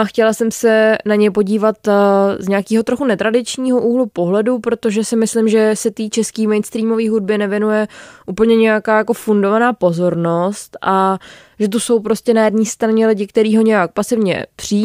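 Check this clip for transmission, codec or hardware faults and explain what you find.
Nothing wrong can be heard in this speech recording.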